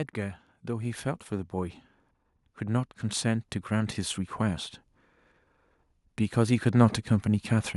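From 0.14 to 1.82 s the level climbs by about 4 dB, then from 2.42 to 4.28 s by about 5 dB: automatic gain rising, where the gain control judged the input too quiet and pushed its gain up step by step. What sets it apart from a talker simply speaking louder or moving closer is that the background noise swells right along with the speech, and the tone stays the same over each slow ramp.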